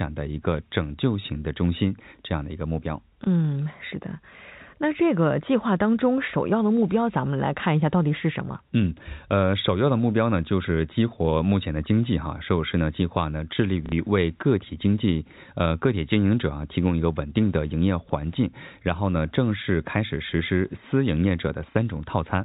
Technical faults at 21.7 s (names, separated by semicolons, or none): clock slip clicks; packet loss with last packet repeated